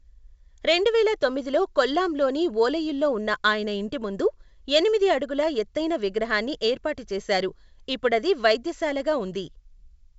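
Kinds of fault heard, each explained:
No fault can be heard in the speech, which has passed through G.722 wideband telephone coding at 64 kbit/s, so the band reaches 7.7 kHz with nothing above it and any coding damage is faint at most.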